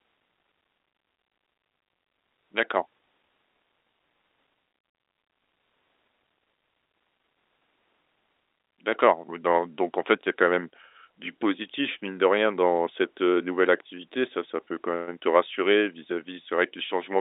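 No technical faults can be heard in the speech, which has the narrow telephone-band sound of G.711 coding, with content running from about 250 Hz to 3.7 kHz as expected for a working line of that kind.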